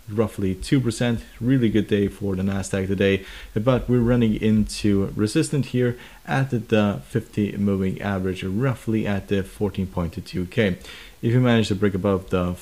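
No faults can be heard anywhere in the recording.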